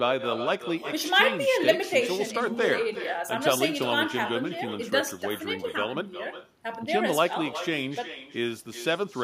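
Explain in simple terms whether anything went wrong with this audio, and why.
Throughout the clip, the speech has echo with no canceller. A quieter copy of the speech returns about four tenths of a second later. The far end's loudspeaker fed its microphone, and nothing there removed that sound before it travelled back.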